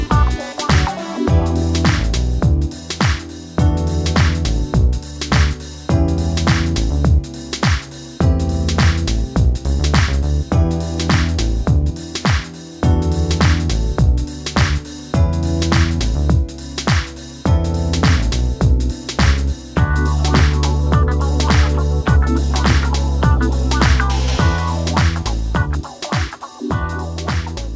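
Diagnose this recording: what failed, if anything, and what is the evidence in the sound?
Nothing in this recording points to a failure anywhere along the chain, so there's no stage to diagnose here.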